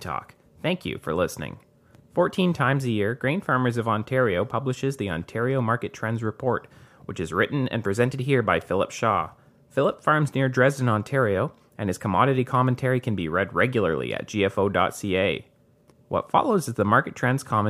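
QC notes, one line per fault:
8.61 s, electrical switching spike: a sharp snap sits on top of the speech, peaking at about -25 dBFS and lasting well under 20 ms. The likely cause is a nearby switch, motor or static discharge arcing briefly and being picked up by the audio line. On a waveform it appears as a narrow, isolated spike. On a spectrogram it shows as a thin vertical line reaching across the frequency range.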